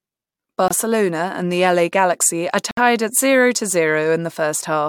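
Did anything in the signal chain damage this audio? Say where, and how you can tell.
Yes. A gap between stream segments, at the playback stage, silences the speech from 0.68 to 0.71 s (24 ms) and from 2.71 to 2.77 s (62 ms), just before "at zero to". Timestamps of consecutive two-second segments don't abut, so the player inserts hard-edged silence.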